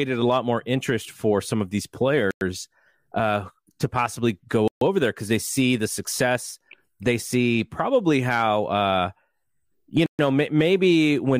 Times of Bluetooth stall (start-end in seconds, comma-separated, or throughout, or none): 2.31-2.41, 4.68-4.81, 10.06-10.19